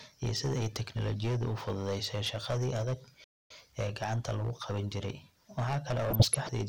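Hard clipping runs through the whole speech clip, driven about 13 dB too hot so that around a tenth of samples are cut flat. It gives harsh fuzz on loud sounds, flat-topped waveform peaks, and a haze of harmonics high in the spectrogram. At 3.24 s a playback stall silences the audio for 0.26 s until 3.51 s, likely because the player ran short of data. It shows as a flat gap in the waveform and a blank vertical band on the spectrogram. From 6.09 to 6.49 s, DAB burbling adds short blips of noise. Weak reception let bit errors, roughly a fraction of a percent, corrupt a run of 17 frames, and isolated sub-band blocks show brief bursts of noise on the spectrogram.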